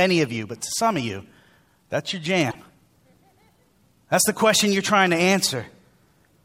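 At 2.50 s, right after "that's your", the speech jumps ahead and about 60 ms, to 2.55 s, comes out garbled rather than as clean sound. This is likely a broken MP3 bit reservoir: frames were lost, so the next frames reached back for borrowed data and decoded bytes from the wrong frame. With 26.1 ms frames, the damage spans roughly two frames before decoding recovers.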